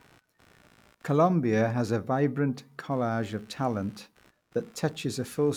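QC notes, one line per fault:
Throughout, computer activity noise: a faint buzzing chirp pulsing around 70 times a second sits about 35 dB below the speech, tracking computer load rather than the speech, as processor, graphics or mouse activity disturbs the ground shared with the audio circuitry.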